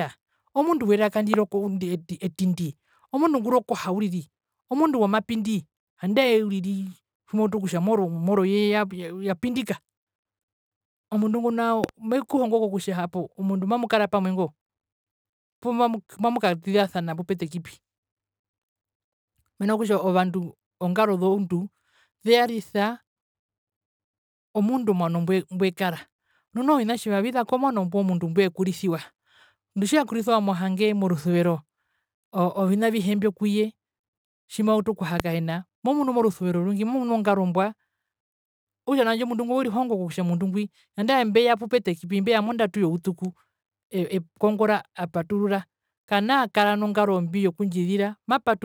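A loud pop hits at 1.34 s after "omundu werka". A quick double pop follows at 11.84–11.91 s, between "omundu ngo" and "mekuhongo kutja omundu mamukara", and a single pop comes at 35.20 s. Each stands roughly 15–25 dB above the speech, which carries on underneath, and the likely cause is a brief voltage spike from a plug, switch or static discharge. On the waveform they appear as sharp isolated spikes, and on a spectrogram as thin vertical broadband lines.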